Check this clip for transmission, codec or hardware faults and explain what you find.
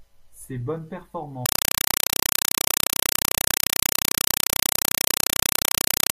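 From 1.46 s to the end, the speech is replaced by a compressed stream played as audio. An AC-3 stream was taken as ordinary samples without decoding. Each frame is a 4 ms noise burst then zero padding, repeating at 31.25 Hz, heard as very loud chattering static.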